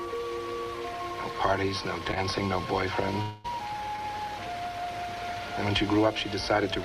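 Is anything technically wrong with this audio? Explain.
Yes, there are three glitches from a network connection losing audio.

Short concealed packet loss hits at 2.11 to 2.14 s and again at 3.96 to 4.00 s. Each time about 20 ms never arrived, and the receiver patched the hole by extending the last bit of sound before blending back. You hear a quick smear or wobble.

At 3.22 to 3.46 s the sound turns into a stretched, buzzy continuation for roughly 0.22 s with no silent gap. Then it jumps ahead with about 0.22 s missing. That's likely a long network dropout, papered over by concealment the whole way.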